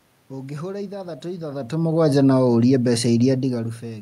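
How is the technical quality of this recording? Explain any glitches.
The technical quality is sound, and there are no glitches to explain.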